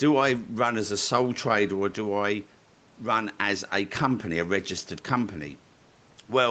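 No technical faults can be heard in this speech.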